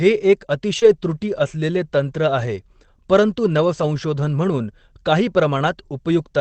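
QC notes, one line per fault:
0.79–0.84 s, short concealed packet loss: about 20 ms of audio never arrived in time, so the decoder stretched the preceding sound over roughly 22 ms and blended back. You get a quick smear or little wobble rather than a hard dropout.
0.82–0.84 s, 2.38–2.48 s and 3.82–3.84 s (just before "म्हणून काही"), lost packet rebuilt from error correction: each hole was patched from a low-bitrate backup copy of the missing audio. The middle one sounds like about three packets and runs 60 ms. No gaps, but those bits come out rougher and grainier. Over the whole call the Opus path tops out around 8 kHz, so there's no extra high-end dip.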